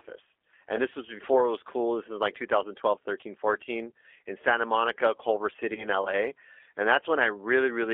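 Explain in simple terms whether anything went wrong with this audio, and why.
Two things went wrong here. The whole recording has gone through the G.729 codec, a very low-data phone codec that rebuilds speech from a rough model of the voice and a handful of pulses every few milliseconds. That's why everything sounds thin, a bit rough and slightly robotic. The line keeps only the middle of the sound, roughly 300 Hz up to 3.5 kHz, so there's no real bass or crispness, and the damage is plainly audible.

On top of that, there are two moments of VoIP packet loss concealed by the speech codec, at about 3.21 to 3.24 s and about 5.75 to 5.89 s. Each time, about 20 ms of sound went missing, and the decoder guessed by stretching what it had just heard while fading it down. That gives a short buzzy or smeared blip. At the second spot the roughness lingers well past the gap, because each frame builds on the last and the decoder needs a while to settle back in.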